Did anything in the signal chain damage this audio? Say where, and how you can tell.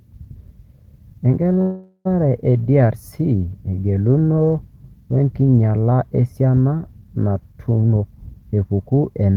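Yes. At 1.61 to 2.07 s there is a call audio freeze at the network and jitter buffer stage: the last sound is held as a fading buzz or hiss ending in a brief silence, then the speech resumes where it stopped, with nothing lost. The likely cause is delayed packets draining the buffer, adding roughly 438 ms of latency.

From 7.82 s to the end, a jitter buffer speed-up at the same stage is audible: the speech runs at about 123% speed with unchanged pitch and sounds hurried. The receiver is cutting pitch-period-length slices repeatedly, around 0.4 s in total, to shed the accumulated delay.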